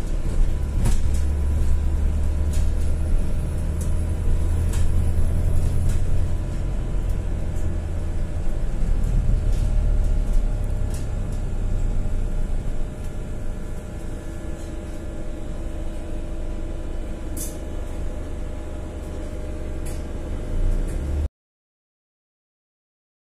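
At 21.26 s the sound cuts off into silence, with no room tone, through the end: an audio dropout to silence, likely from lost input.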